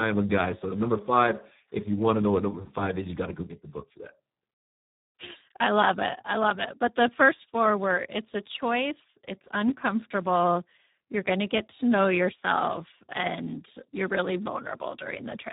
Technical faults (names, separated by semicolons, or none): Speex codec